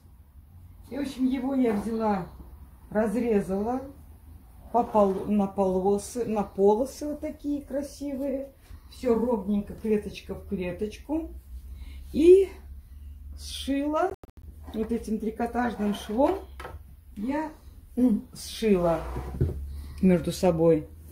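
A Bluetooth dropout breaks up the sound from 14.10 to 14.47 s. Rather than one clean gap, the output cuts out in several short holes scattered across about 335 ms, totalling about 229 ms of silence, with the longest single hole lasting 91.4 ms. Each hole has either hard edges or a fade of a few milliseconds. The cause is likely packets arriving at the headphones too late and being discarded. Each time playback picks up again further along, as though the sound had kept running underneath.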